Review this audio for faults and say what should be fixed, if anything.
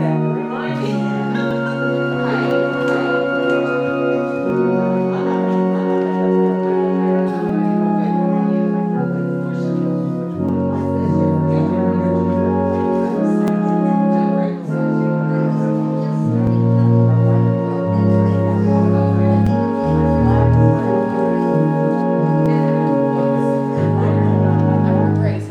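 Audio missing between chunks is heard as brief skips at 1.51, 4.5, 7.49, 10.49, 13.48, 16.47, 19.47 and 22.46 s, evenly spaced every 3 s. Each time, a few milliseconds of sound vanish and the two sides are butted together with no silence in between, which likely points to a recorder dropping samples while it closes one 3-second chunk and opens the next. On a waveform, each skip appears as a sudden step or discontinuity in the trace. On a spectrogram, it shows as a thin vertical seam at each of those times. To prevent it, record into a continuous, double-buffered stream so that no samples are lost at chunk handovers.

A doubled audio track runs from 2.51 to 7.28 s. A full-band copy of the sound trails the original by about 0.7 s at roughly 5 dB lower, with no decay or room colour, and it starts and stops abruptly. The likely cause is a second, slower capture path or a misaligned duplicate in the edit. 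On a spectrogram, the same patterns appear twice, shifted sideways by about 0.7 s. On a waveform, the envelope shows a fainter repeat that begins and ends with a hard edge. To prevent it, route the source through a single capture path and check the edit for stacked copies.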